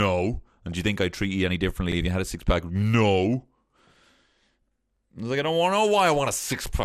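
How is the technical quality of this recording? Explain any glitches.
The technical quality is poor. The speech has codec damage throughout, one burst of digital burbling, and two stutters at regular joins.

The whole clip sounds dull, with a granular, gurgling edge. That is likely MP2 compression. Layer II divides the sound into 32 sub-bands and rations bits among them. Here the upper bands drop out and the rest are coarsely quantised, which fits a low bitrate around 80 kbps.

From 0.61 to 0.78 s, just before "you think I treat", there is DAB burbling. It comes through as short blips of noise. A small fraction of bit errors slipped past error correction, and the wrong samples put noise into single sub-bands.

At 1.92 to 1.97 s, between "treat you any differently" and "if you had a", and again at 4.97 to 5.01 s, before "I was like I", the audio stutters. These are overlapping chunks. The audio was handled in 3-second chunks. 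Each chunk began 44 ms before the last ended, so that slice plays twice.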